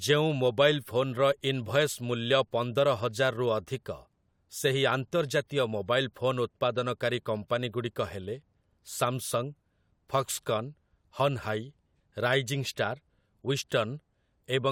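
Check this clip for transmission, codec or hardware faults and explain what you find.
No faults found in this recording.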